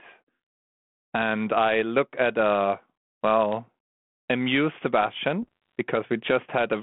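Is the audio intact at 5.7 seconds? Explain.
No. Bit errors on the ADPCM link from 5.42 to 5.75 s corrupt the decoder's step size and predictor, producing pops and rough, level-jumping bursts.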